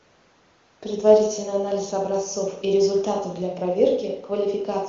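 No technical faults can be heard in this speech, which passes through AMR wideband (HD Voice) coding at what sounds like the codec's highest rate, near 23.85 kbit/s, with at most faint traces of the coding itself.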